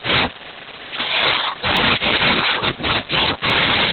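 From the start the speech has heavy Opus voice compression: nothing above 4 kHz, muffled and a bit robotic and hoarse, which fits SILK mode at around 8 kbps. At 1.77 s and again at 3.50 s there's a single sharp click, likely dropped samples, just a handful missing so the waveform jumps.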